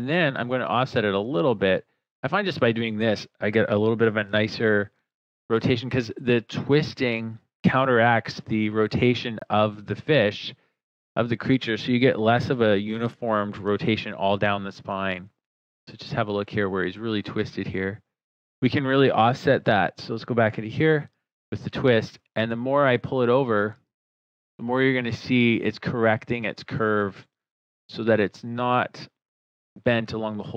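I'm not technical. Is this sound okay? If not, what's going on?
No. At 9.39 s there is a block of digital silence. The sound cuts out for about 20 milliseconds, heard as a short hole.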